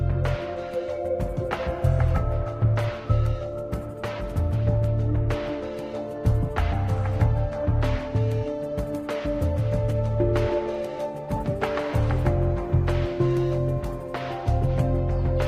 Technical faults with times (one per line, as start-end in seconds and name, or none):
10.74 dropped samples